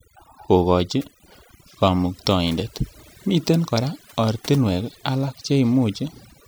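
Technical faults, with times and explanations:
Throughout: overdone noise removal. Noise suppression set far too strong is cutting individual frequency bands whenever they drop near its noise estimate, taking quiet speech detail with them. Pauses sink to near silence with twinkling specks. A spectrogram shows scattered, isolated bright dots on a black background and ragged, gappy harmonics.
2.59 s and 5.27–5.29 s: corrupt frame decoded. Damaged compressed frames were decoded anyway, so energy lands at the wrong frequencies. Each produces a short chirp or blip, about one frame at 2.59 s and about two at 5.27 s, peaking near −25 and −20 dBFS. A spectrogram shows brief, misplaced vertical smears, and the waveform shows small spikes.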